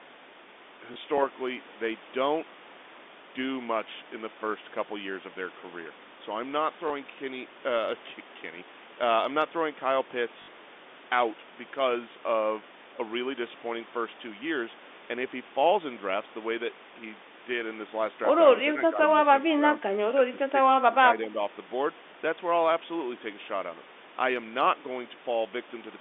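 The first thing you'll catch is packet loss with the last packet repeated, at 0.94 to 0.96 s, 6.88 to 6.90 s, and a longer one at 10.42 to 10.48 s. When audio went missing, the receiver just replayed the previous chunk. The early two are 20 ms gaps, which fits a single lost packet. The third runs 60 ms, which points to three in a row. That longer run gives a brief robotic stutter with a buzz at about 50 Hz.

Later, between 18.73 and 20.55 s, the speech dips three times: 18.73 to 18.99 s, 19.42 to 19.82 s, and 20.16 to 20.55 s. The first two sag by around 10 dB and the last by a gentler 5 dB or so, with only part of each window actually pulled down. This is likely speech suppressed in double talk, where the echo canceller mistook the overlap with the far side for echo and ducked the talker along with it. You hear the voice fade in patches through the narrow telephone band.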